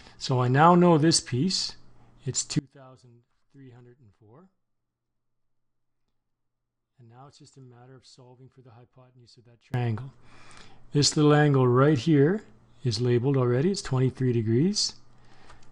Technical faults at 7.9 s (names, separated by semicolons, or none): audio dropout to a faint residue